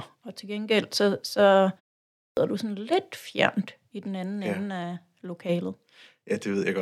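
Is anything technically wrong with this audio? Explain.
Yes, there's a clipped start after a pause. Right after "til gengæld så så" and a pause of about half a second, the output device seems to doze off. It misses about 140 ms, from 2.23 to 2.37 s, so "du sådan lidt fjernt" lurches in abruptly, its opening sounds gone.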